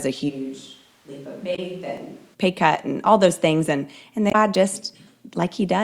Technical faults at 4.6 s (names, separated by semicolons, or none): dropped buffer (overrun)